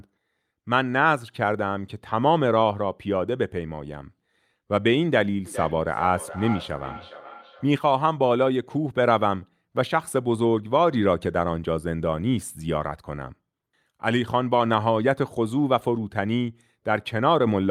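From 5.46 to 7.78 s, feedback echo between two devices: a second device replays this microphone's signal, which is recaptured beyond its echo canceller's reach. Speech returns roughly every 400 ms, thinner and ringing, peaking about 13 dB below. Spectrograms show fainter, evenly spaced repeated stripes.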